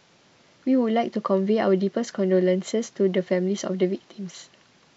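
No faults turn up anywhere in this short bit of speech, so there's nothing here to walk through.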